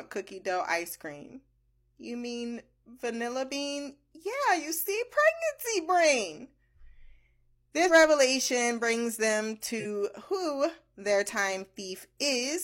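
Whole frames of the compressed speech were never decoded, either missing from the file or rejected as damaged, so playback skips ahead. These compressed frames skipped show up at 7.85–7.90 s, just before "revelation brings them", where roughly a tenth of a second of audio vanishes, and at 9.76–9.86 s, between "revelation brings them" and "who their", losing around 50 ms.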